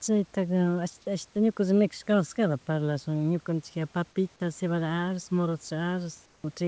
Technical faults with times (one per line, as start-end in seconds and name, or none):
6.26-6.44 comfort noise in place of the background